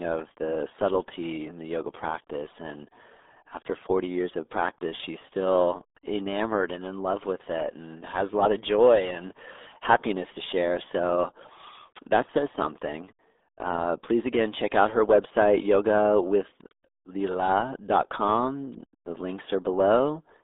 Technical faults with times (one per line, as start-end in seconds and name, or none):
0.00-20.43 RealAudio 14.4 codec